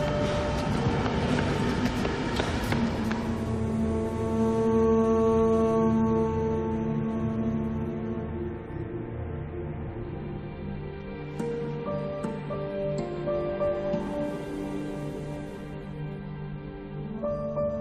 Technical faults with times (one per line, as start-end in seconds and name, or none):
8.28 compressed frames skipped
9.86 compressed frames skipped
12.53 compressed frames skipped
14.06 compressed frames skipped
15.57 compressed frames skipped
17.17 compressed frames skipped